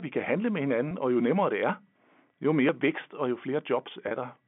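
At 0.89 to 0.91 s, just after "vi kan handle med", there is a brief buzzy hold. This is packet loss with pitch repetition. About 20 ms went missing, which fits two lost 10 ms packets. The receiver filled the gap by repeating the last pitch period, so the sound sticks for a moment before "og jo nemmere det".

At 1.70 s, after "og jo nemmere det", the sound skips forward abruptly. The same skip comes again at 2.69 s, just before "vækst og jo". A few milliseconds are gone each time, and the two sides are butted together with no silence. The skips fall one second apart, so the likely cause is audio missing between chunks, with a piece dropped at each chunk boundary.

At 4.08 to 4.11 s there is a second packet loss with pitch repetition. About 30 ms is lost, which points to three packets. The repeated pitch period bridges it as a short, slightly held buzz. The whole clip is carried in the narrow band of G.711 telephone coding, roughly 150 Hz to 3.5 kHz.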